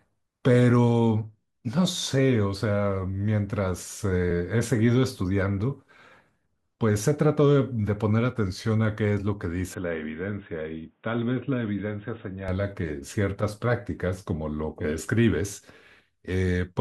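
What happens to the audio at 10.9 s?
At 10.9 s the speech sits inside a dull, band-limited stretch running from 9.74 s to 12.48 s, most likely an input switched to a poorer device. Nothing reaches above 3.8 kHz, the level falls by about 5 dB, and a new background noise appears roughly 45 dB under the speech. A plain low-pass filter or codec bandwidth cut would change only the top end. Here tone, level and noise floor all shift together, with no gap at either switch.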